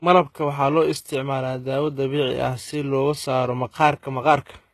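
Throughout the speech, the treble is synthetic and stops near 12.3 kHz; sibilants sound gritty and metallic, likely from HE-AAC compression rebuilding highs at a low bitrate around 16 kbps.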